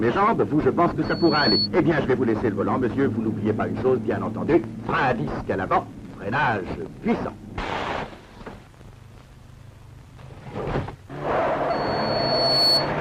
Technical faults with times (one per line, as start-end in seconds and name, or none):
1.04-1.68 loudspeaker feedback squeal
11.70-12.93 loudspeaker feedback squeal